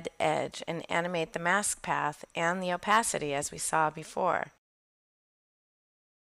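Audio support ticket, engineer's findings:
No faults found on listening.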